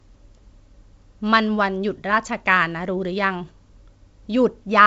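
No technical faults occur in this speech clip, which comes through G.722 wideband telephone coding at 56 kbit/s with nothing above about 7.7 kHz.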